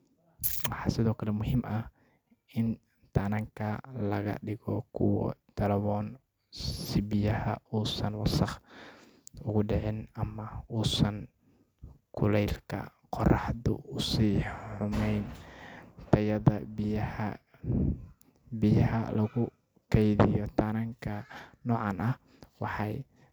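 No technical faults can be heard in this recording at any point.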